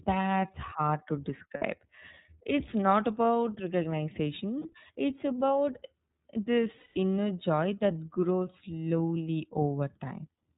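A speech clip that's been through the iLBC codec the whole way. It's narrowband, so nothing above 4 kHz survives, and the coding roughness is plainly audible: a slightly synthetic, gritty edge that fits iLBC's 13.33 kbps, 30 ms frame mode. There are also three spots of lost iLBC frames. The first is right after "hard to", at 1.56 to 1.63 s, and the second is at 4.59 to 4.66 s, each about 60 ms. The third runs about 180 ms, from 6.77 to 6.96 s. In each gap the decoder loops the last pitch cycle with added noise, so you hear a held, buzzy vowel. The longer gap fades as it goes. Because each frame decodes independently, speech snaps back cleanly right after each gap.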